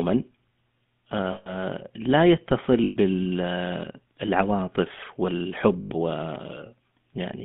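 The whole clip passes through the GSM full-rate codec, which rebuilds the speech from a coarse pulse excitation within a 150 Hz to 3.5 kHz line, leaving a plainly buzzy, gravelly roughness. Lost GSM frames at 1.32 s (140 ms), 2.84 s (120 ms) and 5.80 s (100 ms) are concealed by repeating the previous good frame, so the sound smears into a short metallic ring.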